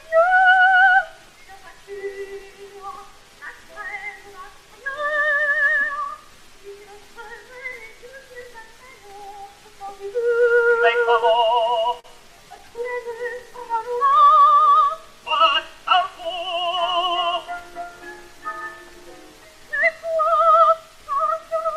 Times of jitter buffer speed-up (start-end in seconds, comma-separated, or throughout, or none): 16.39-18.01